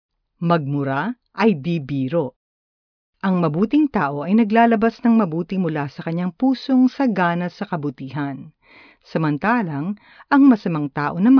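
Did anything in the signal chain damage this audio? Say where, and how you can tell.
No, nothing audible in this speech points to damage at any stage of the signal chain, from capture through storage to playback.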